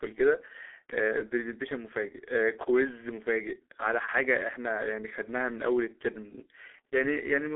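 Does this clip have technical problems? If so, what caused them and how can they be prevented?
Yes. The whole clip carries G.723.1 codec damage: speech sounds muffled and hoarse with smeared consonants, which fits a very low bitrate around 6 kbit/s. A spectrogram shows energy held to about 300 Hz–3.5 kHz, nothing above 3.8 kHz, and blocky, slowly changing harmonics. To prevent it, use a wideband, higher-bitrate codec.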